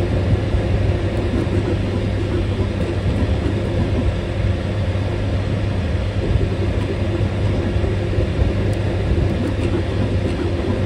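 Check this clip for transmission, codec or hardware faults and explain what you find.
One hardware fault is present, running through the whole clip.

Computer activity noise sits under the sound from start to finish: a faint whining chirp with a pulse rate of roughly 1 kHz, around 45 dB below the signal. The processor, graphics card or mouse pulls varying current, and that disturbs the ground the audio circuit shares with them. Unlike mains hum, it isn't locked to 50 or 60 Hz harmonics, and it tracks the machine's workload rather than the audio itself.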